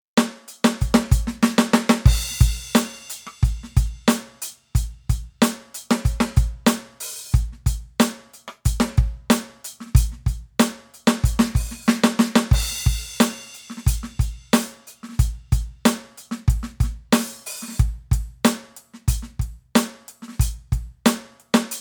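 No technical faults can be heard anywhere in this music. There is nothing to report at any point in the clip.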